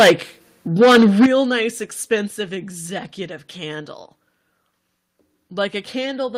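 From 0.00 to 0.12 s, and again from 0.80 to 1.26 s, the loudest syllables sound flattened and crackly, with peaks driven about 12 dB and then about 10 dB past full scale and a large share of samples squared off. This is likely microphone overload, where the input level is set high enough that the converter clips the waveform tops.

At 1.26 s, right after the second distorted stretch, speech and background fall together by about 11 dB, then by about 4 dB more at 2.28 s. Each change is an abrupt step, not a fade, likely a microphone volume stepped down by the call software in response to the clipping.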